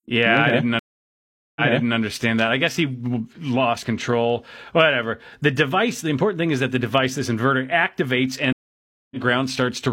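Speech with two stream reconnects. After "yeah okay i didn't" at 0.79 s it drops out for 766 ms, then restarts 418 ms earlier, replaying a bit before "that i guess he" at 1.98 s. At 8.53 s, after "device this inverter activates", there's a 585 ms gap and it comes back about a tenth of a second later, so a sliver is skipped.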